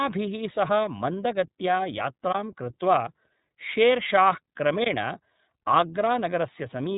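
The iLBC codec shapes the whole clip. Each 30 ms frame of speech has its excitation coded independently of the frame before, at a rate that fits 13.33 kbps. Nothing above 3.8 kHz survives, so the speech sounds narrowband and muffled at the top, with a plainly audible rough, slightly synthetic grain to the voiced sounds. This comes from the coarse per-frame modelling rather than from any single event.

A block of digital silence appears at 2.33 s and again at 4.84 s, each about 21 ms long. Each time, a run of samples is set to zero, which fits a 1024-sample block. The likely cause is the output buffer not being filled in time. The sound drops to nothing and returns with no fade, and each gap is heard as a brief hole.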